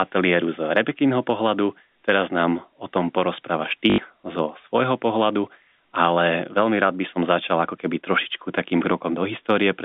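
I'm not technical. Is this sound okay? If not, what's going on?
No. Between 3.90 and 3.98 s, just after "tom porozprávaš" and before "zo svojho pohľadu ale", pieces of the speech got lost in transit. This is packet loss with last packet repeated: the receiver filled the 80 ms gap, likely four 20 ms chunks, by replaying the final chunk it had, causing a brief robotic stutter. The narrow telephone-style sound comes from ordinary G.711 phone coding.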